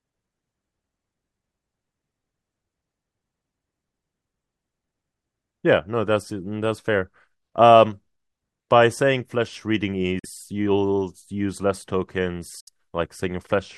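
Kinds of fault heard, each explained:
Bluetooth dropout: at 10.19–10.26 s and 12.60–12.69 s the speech cuts to silence, then resumes further along as if it had kept playing, with 43 ms and 64 ms of audio missing, likely from late wireless packets being discarded.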